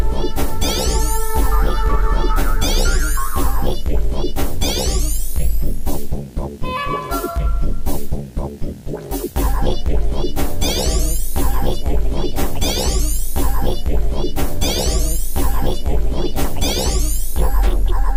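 Video or display buzz runs through the whole clip, from start to finish. Interference from a screen or video cable has coupled into the audio path, so the picture's field rate leaks in as a steady buzz at 59.94 Hz, roughly 25 dB below the wanted sound, with a gritty hash of harmonics above it. On top sits a thin, very high tone at 15.7 kHz, the video line rate.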